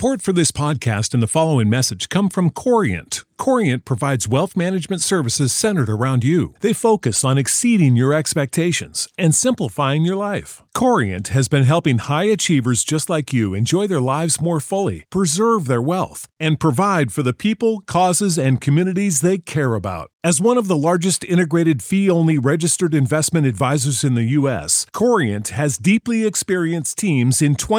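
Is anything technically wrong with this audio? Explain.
No, nothing technically wrong can be heard here.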